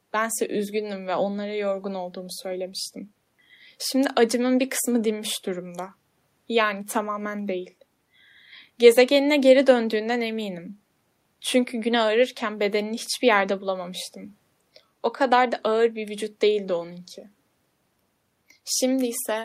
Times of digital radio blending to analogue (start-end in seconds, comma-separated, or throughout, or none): none